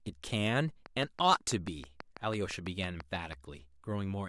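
From 0.86 s to 3.34 s a train of clicks runs over the speech: about fifteen near-identical pulses at a regular 6.1 per second, peaking around 10 dB above the signal and audible in pauses too. Interference from nearby equipment is the likely cause.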